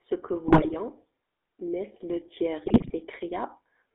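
Throughout, the speech carries the buzzy, gravelly texture of the GSM full-rate codec. The band runs only from about 300 Hz to 3.6 kHz, and the roughness comes from the codec rebuilding the voice from a vocal-tract model fed by a sparse, regularly spaced pulse excitation, a coarse scheme that fits a 13 kbps rate. Unlike plain low-bitrate MP3 smearing, the damage here is a steady buzz locked to the voice rather than swirling, watery artefacts.

From 0.48 to 0.76 s, and again from 2.64 to 2.93 s, GSM bit errors break through. Corrupted filter, pitch and gain values reach the decoder, so over those stretches the spectrum twists and the level jumps from frame to frame, giving squawks, pops and gargling. Packet loss leaves gaps or smooth fills. These bursts are distorted garbage in place of the speech.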